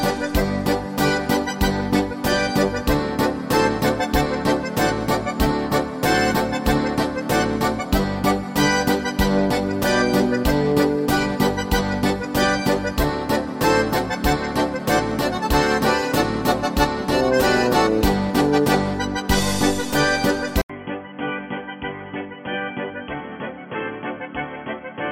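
At 20.62 s the audio cuts out for 80 ms, then continues to the end duller and boxier, about 10 dB quieter, with nothing above 3.3 kHz and a new noise floor around 45 dB down. The input was likely switched to a poorer device. A spectrogram shows a flat ceiling at 3.3 kHz; the waveform shows a brief gap and a shrunken envelope.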